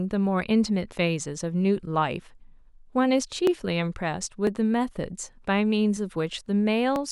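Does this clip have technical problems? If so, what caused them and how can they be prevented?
Yes. From 3.47 s to 6.96 s the speech carries a regular ticking, a small click about every 0.5 s, around seven in all. These are periodic USB or driver dropouts: something on the system stalls the USB bus or audio driver at a fixed interval, and each stall drops roughly a millisecond of audio outright. The jump in the waveform at each skip produces the tick, heard only where signal is present. To prevent it, find and disable the background process or power-saving feature polling the bus, update the audio driver, and give the interface its own USB port.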